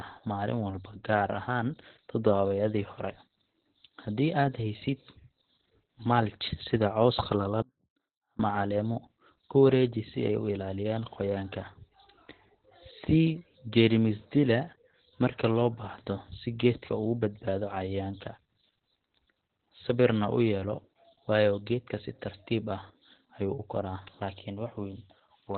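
The speech carries Opus voice compression from start to finish. Nothing survives above about 4.2 kHz. That is a narrowband signal, coded by the SILK linear-prediction path. The coarse excitation makes the voice muffled and hoarse, with a slightly robotic edge. The damage is heavy, which points to a very low bitrate, around 8 kbps. Consonants lose their crispness, and sibilants are dull because their upper energy is gone.

From 7.62 to 8.39 s there is an audio dropout to a faint residue. The wanted signal vanishes for about 0.77 s and then snaps back. The change is abrupt, not a pause or a fade. The gap is not silent. A faint trace of sound remains, roughly 30 dB below normal level. This suggests the path after the break stayed live while the main feed was lost.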